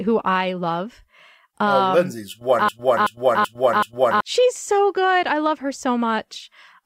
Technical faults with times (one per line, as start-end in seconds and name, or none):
2.69-4.21 broken-record loop